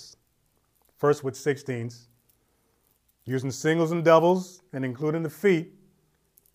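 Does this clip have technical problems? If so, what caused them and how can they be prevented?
No, this clip has no technical problems, so there is nothing to prevent.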